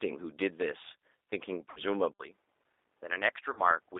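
The whole recording has passed through a low-rate speech codec that models the voice with a vocal tract filter and pulse excitation instead of preserving the waveform. What comes through is a line band of about 300 Hz to 3.7 kHz with plainly audible codec damage, a rough, slightly synthetic edge that fits an 8 kbit/s G.729-type codec.

From 1.70 to 1.80 s there is VoIP packet loss concealed by the speech codec. About 60 ms of audio never arrived, which fits three lost packets. The decoder filled the gap by extending its last pitch and filter settings at falling gain, so the sound smears into a buzzy tone or coloured noise that fades. Because each frame builds on the one before, the voice stays weak or distorted for a short while after the packets return.

At 2.12 s the input likely switched to a poorer device. There is an 80 ms silence at the change. After that, nothing above 3.8 kHz comes through, the level drops somewhat, and a faint new background noise sits well under the signal. 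The sound stays duller and boxier to the end.

From 3.53 to 3.68 s a second concealed packet loss covers about 40 ms, consistent with two lost packets. It produces the same stretched, fading sound, and the voice again stays weak or distorted for a short while after.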